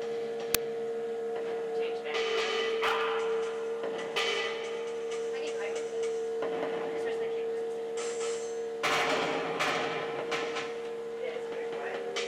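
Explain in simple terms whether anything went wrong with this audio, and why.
Something did go wrong, very early on. At about 0.55 s there is a tiny burst of harsh static with sharp edges, over almost as soon as it starts. This is file tags played as audio. Audio files can carry extra information, such as a cover picture. Here the player read part of that picture as if it were sound. Picture data is packed tightly, so it comes out as loud, random hiss.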